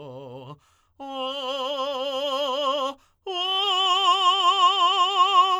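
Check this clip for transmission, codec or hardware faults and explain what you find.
No transmission, codec or hardware faults.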